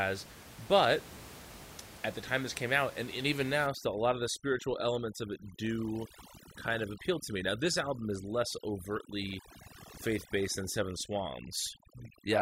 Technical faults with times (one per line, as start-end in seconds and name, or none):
3.67-12.42 overdone noise removal